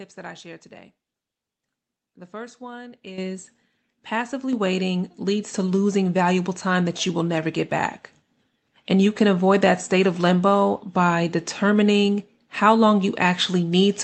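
At 3.18 s, just after "first one", the microphone volume steps up: the call software judged the input too quiet and raised the device gain by about 10 dB in a single move, so the speech and the room noise jump louder together. A second step of about 4 dB follows at 4.53 s, just before "waiting leads to losing". On a waveform each step is a sudden widening of the envelope. On a spectrogram it shows as a vertical brightening across every frequency at once, up to the 8 kHz ceiling of the call codec's band.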